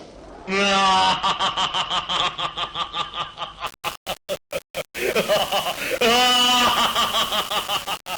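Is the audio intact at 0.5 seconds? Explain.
No. Between 0.47 and 0.52 s, compressed frames are skipped. Roughly thirty 20 ms frames never reach the decoder or are rejected as damaged. The audio jumps ahead by about half a second.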